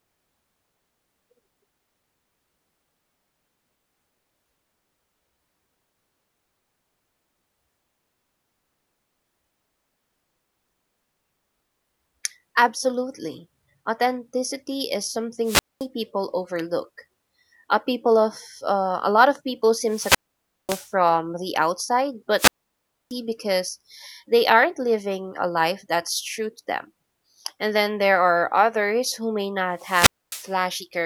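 Four wireless microphone squelch dropouts break up the speech, at 15.44 to 15.86 s, 19.84 to 20.93 s, 22.36 to 23.14 s and 29.76 to 30.55 s. Each time, the radio link fades and hiss rises until the receiver's squelch cuts the output, leaving silent holes of 0.22, 0.54, 0.63 and 0.26 s. On a spectrogram, broadband noise smears upward before each blank vertical band, and the waveform drops flat to near zero before the voice resumes.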